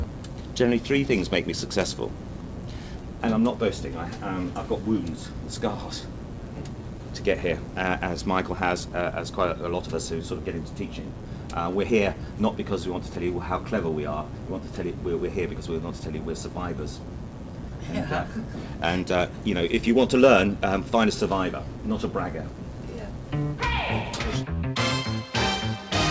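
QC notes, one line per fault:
Throughout: clock drift between sender and receiver. The sender's clock runs roughly 3% slow. The jitter buffer keeps draining, so the receiver must keep padding the audio.
0.06–25.78 s: repeated timing corrections. Short pieces are repeated at uneven intervals, always lengthening. Playback runs at 97% speed, adding about a second in small edits.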